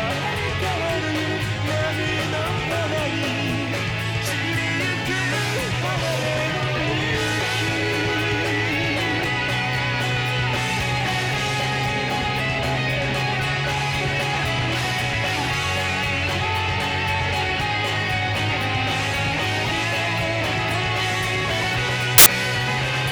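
Samples built from the wrong bytes appear from 22.18 to 22.26 s, a burst of loud, harsh broadband noise lasting about 80 ms. The reader assembles each sample's bytes wrongly, so the rapidly changing low-order bits become the dominant part of every value and drown out the sound.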